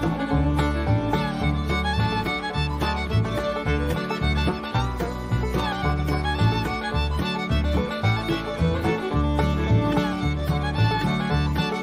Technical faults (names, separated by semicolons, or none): none